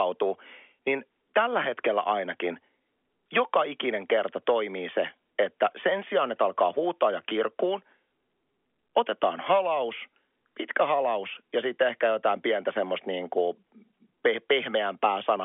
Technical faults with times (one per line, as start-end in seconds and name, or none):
none